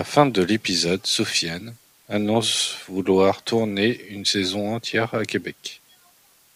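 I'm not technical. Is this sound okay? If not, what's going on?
No. A steady, even hiss runs under the speech from start to end. This is low bit depth with dither, which fits roughly 9 bits, giving clean noise rather than distortion.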